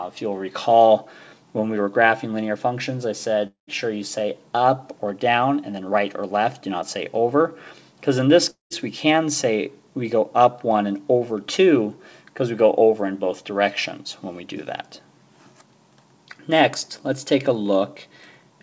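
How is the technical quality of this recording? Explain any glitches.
Two brief breaks interrupt the recording, at 3.47 to 3.70 s and at 8.50 to 8.73 s. Each time, the last sound smears into a fading buzz for about 0.2 s, goes silent for roughly 0.13 to 0.14 s, and then resumes slightly further on, with about 210 ms lost. This pattern likely comes from a long network dropout. Packets stopped arriving, the receiver stretched the previous audio to cover the gap, gave up, and then skipped ahead. Throughout the clip, nothing is heard above 8 kHz, which fits a G.722 call path at 64 kbps.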